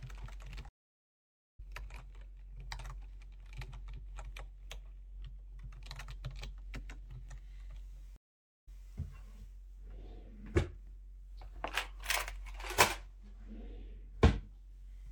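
At 0.69 s a stream reconnect cuts the sound to about 0.9 s of silence. The player's connection dropped and a fresh decoder picked up about a second later in the stream, so material is skipped. At 8.16 s a second reconnect leaves 0.51 s of silence, and playback resumes 0.17 s earlier, repeating a short stretch. Both show as blank vertical gaps on a spectrogram and flat zero-line stretches in the waveform, ending around 1.60 s and 8.84 s.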